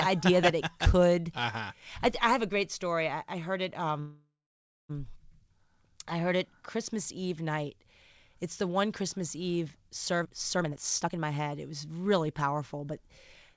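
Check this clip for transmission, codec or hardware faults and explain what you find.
Two transmission faults are present, both on the receiving side of a call path whose audio stops at 8 kHz, which fits a wideband codec such as G.722.

From 4.00 to 4.92 s there is a call audio freeze. The sound stalls, is stretched into a fading tail, then drops to silence for about 0.58 s before resuming where it left off. Delayed packets likely emptied the jitter buffer, inserting roughly 0.9 s of gap without losing content.

From 10.20 to 13.07 s a jitter buffer speed-up occurs. To drain excess buffered audio, the receiver repeatedly cut out short pitch-period segments, removing about 0.7 s in total. Speech plays at about 122% speed with unchanged pitch, sounding noticeably rushed.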